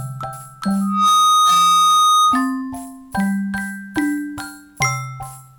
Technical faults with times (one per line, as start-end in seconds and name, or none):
0.81-2.62 loudspeaker feedback squeal